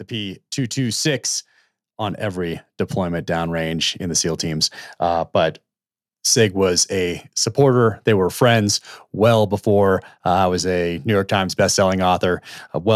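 Automatic gain rising from 1.97 to 4.51 s: the gain control judged the incoming speech too quiet and raised its gain gradually, by about 6 dB over roughly two and a half seconds, so the voice and the background noise swell upward together.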